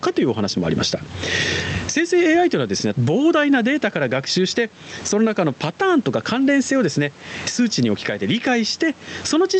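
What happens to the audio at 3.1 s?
At 3.1 s the audio is in the middle of gain pumping that runs through the whole clip. The gain swings by around 15 dB, pulled down under each loud moment. The likely cause is excessive microphone gain pulled down by a fast limiter, which squashes the level.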